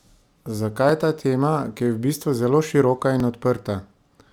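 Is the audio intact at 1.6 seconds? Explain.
Yes, at 1.6 seconds the speech plays through intact, with no dropout, click, distortion or other fault at that moment.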